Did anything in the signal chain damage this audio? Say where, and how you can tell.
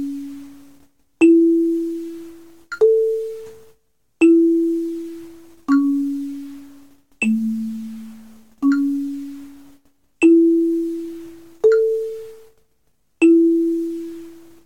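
No, nothing I can hear points to any stage of the chain having left a mark on this one.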